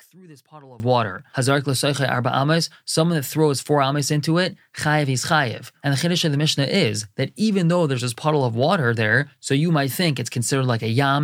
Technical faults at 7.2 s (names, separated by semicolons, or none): none